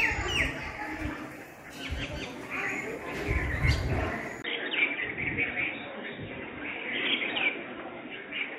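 At 4.42 s the sound drops out for about 20 ms, then returns dull and boxy, with nothing above 3.8 kHz and a faint new noise floor, at about the same level. This is likely an input switched to a poorer device. A spectrogram shows the upper band cut off abruptly from there on.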